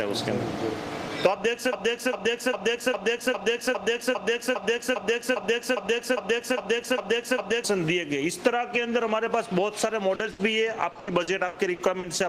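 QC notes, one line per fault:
1.73–7.64 s, broken-record loop: a 404 ms fragment plays back to back about 15 times, so the same snippet stutters for nearly six seconds. Something likely stalled in the player or stream and kept resending its last chunk, and whatever belonged there is gone.
10.15–10.22 s, short concealed packet loss: 40 ms never arrived in time, and the receiver papered over it by stretching the previous sound before blending back in. You hear a quick smear or wobble.
10.31–10.42 s, burst of packet loss: a bigger 80 ms hole. The last sound gets carried forward and faded as the gap drags on, so it comes across as a brief held buzz or fading hiss, then jumps ahead with that bit missing.
10.91–12.06 s, repeated packet loss (robotic sound): six separate dropouts in about a second, 320 ms patched in total, longest 80 ms, roughly 28% of the stretch. Each hole is filled from the last sound right before the next hits, hence the choppy texture.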